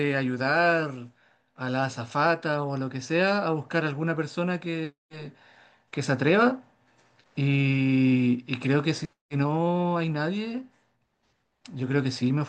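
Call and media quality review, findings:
Nothing to flag on this speech recording; no faults turned up anywhere in it.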